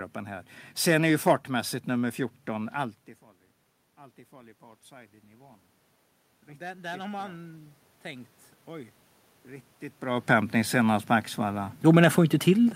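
It's a speech clip, and the one real issue is the automatic gain rising from 6.46 to 8.98 s, just before "riktigt bra upphämtning senast". The input level dropped by about 22 dB, so the gain control slowly pushed up by about 5 dB, and you can hear the voice and the room noise swell together over those two and a half seconds. The level shifts around 3 s and 10 s are just the talker moving relative to the mic.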